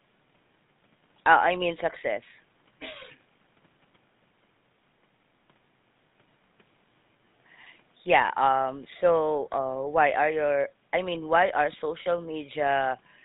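From start to finish the speech passes through a GSM full-rate codec, and the damage is plainly audible as a buzzy, gravelly roughness, consistent with a 13 kbps stream. The codec rebuilds the voice from a vocal-tract model driven by sparse, regularly spaced pulses, so fine detail is lost. On a spectrogram, energy stops sharply at 4 kHz with harmonics smeared. The faint room noise, about 42 dB below the speech, sits beneath it.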